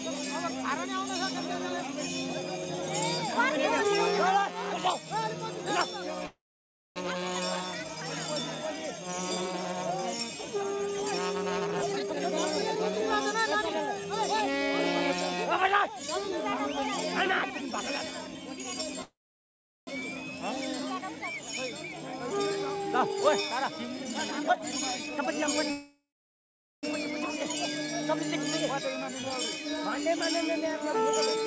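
At 6.26 s the sound stalls for about 0.72 s. The last fragment smears into a short fading buzz, then falls silent for about 0.57 s before resuming exactly where it stopped. This is a call audio freeze, likely from packets held up until the jitter buffer ran dry. Unlike a dropout, nothing is skipped; the audio simply arrives later.

From 11.61 to 14.52 s the sound turns hurried, running at 119% speed while keeping its pitch. This is a jitter buffer speed-up: the receiver trims pitch-period-length slices to shed roughly half a second of backlog. A resampling fault would raise the pitch too, so the unchanged pitch sets this apart. A milder pass at 106% follows from 17.30 to 18.58 s.

A second freeze runs from 19.02 to 19.89 s, with the same fading tail and about 0.72 s of silence.

From 21.89 to 25.28 s the speed-up returns at 121%, removing roughly 0.7 s.

The third and longest freeze spans 25.71 to 26.85 s, adding about 1.1 s of delay, with about 0.77 s of silence.

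A 104% speed-up runs from 28.80 to 31.37 s. Throughout, nothing is heard above 8 kHz, which fits a wideband call codec such as G.722.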